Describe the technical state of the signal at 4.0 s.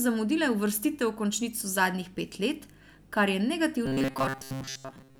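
At 4.0 s the speech is in robotic sound from repeated short buffers, lasting from 3.86 s to the end. A rigid 134 Hz metallic buzz is present, likely from looping chunks of about 7.5 ms for most of that span. Unlike dropouts, it leaves no silent gaps.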